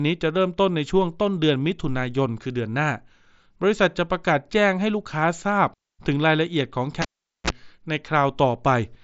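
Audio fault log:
7.02 to 7.50 s, cable pulled and plugged in: a pop, about 0.43 s of near silence, a brief 60 Hz mains buzz as the tip touches, then another pop when the sound returns.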